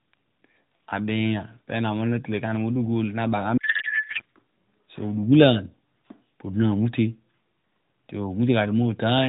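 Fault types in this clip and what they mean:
Codec payload misread: the receiver unpacked octet-aligned AMR frames as if they were bandwidth-efficient, putting every field in the wrong bit positions. From 3.58 to 4.22 s the speech is replaced by garbled, warbling noise that barely follows it, before the narrowband AMR sound returns.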